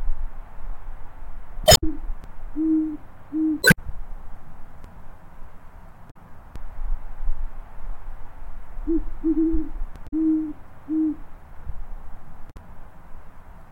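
Damaged data in a compressed stream shows up five times: 1.63–1.84 s, 3.60–3.79 s, 6.07–6.16 s, 10.04–10.13 s and 12.47–12.56 s. Each time the decoder chokes on bad frames, loses sync and hunts for the next header, leaving a short chirpy squawk or blip.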